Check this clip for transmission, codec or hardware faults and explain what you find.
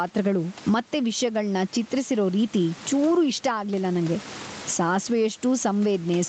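One fault runs through the whole speech clip: gain pumping. The gain swings by around 20 dB, leaving loud and quiet passages squashed toward one level. The likely cause is input gain set far too high, with a fast limiter or compressor clamping down on each loud sound and releasing in the gaps. The room noise itself sits about 31 dB below the speech, and the call codec's cut-off near 8 kHz is audible as the expected loss of top end.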